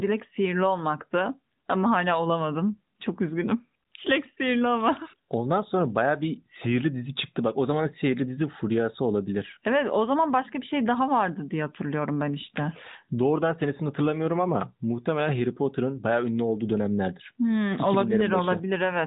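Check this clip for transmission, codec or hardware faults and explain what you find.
No transmission, codec or hardware faults turn up in this speech, which carries the narrowband character of the AMR mobile codec, with nothing above 4 kHz and only the light synthetic colouring that fits its highest, 12.2 kbps mode.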